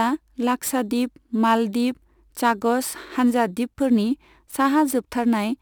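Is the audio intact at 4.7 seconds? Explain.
No. At 4.7 seconds, as across the whole clip, crude rate conversion is at work: samples were simply repeated to stretch the rate, with no filtering, in a pattern that fits a 44.1 kHz to 48 kHz change. That repeating error produces tones unrelated to the speech, sitting only around 25 dB below it, so the speech carries a gritty, inharmonic fizz that rides along with its louder and brighter sounds.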